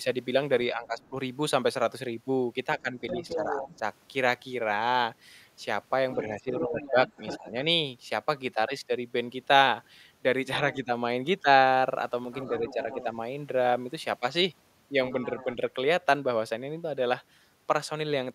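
From 0.72 to 7.53 s there is speech suppressed in double talk. The talker's speech dips in pieces, roughly 1.5 s in total, at worst by about 10 dB. The likely cause is an echo canceller turning everything down while both sides talked at once.

Overlapping this, from 1.02 to 7.38 s, the other side's voice is leaking through at about 10 dB below the speech. It is likely loudspeaker echo the canceller failed to remove from the microphone.

From 10.73 to 15.56 s the other side's voice leaks through again, fainter, at about 20 dB below the speech. Overlapping that, from 12.68 to 15.61 s, the speech is suppressed in double talk once more. The dips are brief, about 0.2 s in total, and shallower, near 5 dB.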